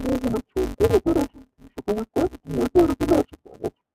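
From start to finish the speech is affected by interleaved audio read as planar. Each 5.33 ms block, which fits a 256-sample buffer, has its alternating left and right samples split into halves, so each channel gets a half-speed slice. With blocks this short, the result is dull and robotic, with a buzz at about 188 Hz and no clear octave drop. On a spectrogram, the buzz shows as steady bands spaced 188 Hz apart. The waveform shows a step every 5.33 ms.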